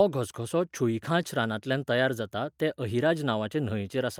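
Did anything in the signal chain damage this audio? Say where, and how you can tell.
No, nothing in the chain damaged this audio.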